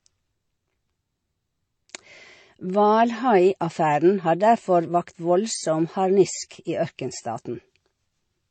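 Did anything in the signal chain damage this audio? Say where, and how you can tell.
Yes, at the codec stage, across the whole speech clip. Nothing is present above 8.9 kHz. Two different sets of codec artefacts are heard together. This is likely transcoding between lossy codecs, fitting a low-rate MP3 re-encoded as HE-AAC. The second encoder spent bits on the first one's damage.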